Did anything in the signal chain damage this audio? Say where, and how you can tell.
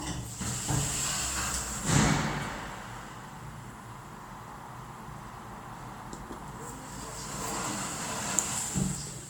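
Yes, at the codec stage, and it runs the whole way through this everyday-sound recording. It has that swirly, hollow, smeared quality, with attacks going soft, and nothing comes through above about 19.9 kHz, which fits a 128 kbit/s MP3. That's generation loss, most likely from something like ten decode-and-re-encode passes. Each pass quantises on a shifted frame grid, so the noise and spectral holes stack up well past what one encode would do.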